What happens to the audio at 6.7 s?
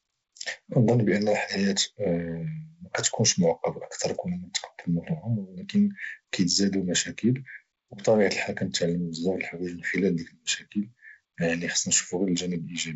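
At 6.7 s the speech is intact, with no dropout, click or distortion, only the steady wideband telephone sound of G.722 coding with nothing above about 7.7 kHz.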